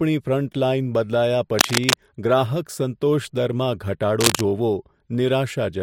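From 1.59 to 1.96 s and again from 4.20 to 4.42 s, cable scratch noise rustles over the speech at about its own level, likely from a worn lead or connector being moved; unlike isolated clicks or crackle, each burst is dense and continuous.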